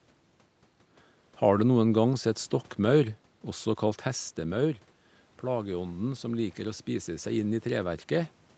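From 5.43 s to 8.39 s the automatic gain rises. After the talker moves back from the microphone around 4 s, the speech arrives about 9 dB quieter, and the gain control slowly adds about 5 dB to compensate. The speech and the room noise swell together over those three seconds. On a waveform the envelope climbs gradually, noise floor included. On a spectrogram the whole band below 8 kHz brightens evenly.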